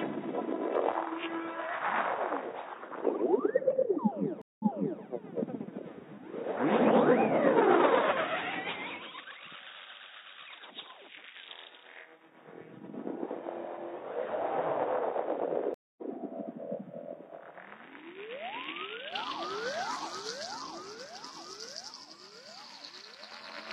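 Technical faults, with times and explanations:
0.00 to 19.12 s, input switched to a poorer device: The sound is dull and boxy, with nothing above 3.8 kHz. It sits about 5 dB quieter, over a new background noise roughly 45 dB below it. At 19.12 s the full band, level and clean floor return at once, with no gap. This likely comes from the input running on a lower-grade microphone or a headset's call profile, then switching back.
4.42 to 5.02 s and 15.74 to 16.03 s, stream reconnect: Each time the audio drops out and resumes from a fresh decoder. At 4.42 s the silence lasts 182 ms, and playback resumes 418 ms earlier, so a short stretch is heard twice, as when a server resends a burst. At 15.74 s the silence lasts 230 ms, and playback resumes about 150 ms later, so a short stretch is skipped.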